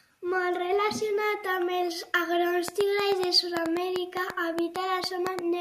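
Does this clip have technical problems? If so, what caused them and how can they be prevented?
Yes. A train of clicks runs from 2.68 to 5.40 s: roughly fifteen similar pulses, about 5.5 per second at uneven spacing, standing well above the speech and ticking through pauses too. Their near-identical shape and persistence set them apart from random crackle or a single dropout pop, and likely come from nearby equipment interference or a faulty connection or power supply. Keep phones and other electronics away from cables and the interface, and use a stable, well-powered interface connection.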